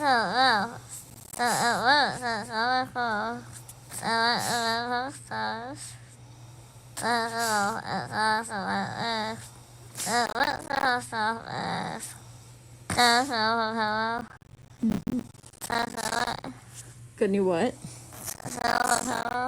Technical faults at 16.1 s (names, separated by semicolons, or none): processor overload crackle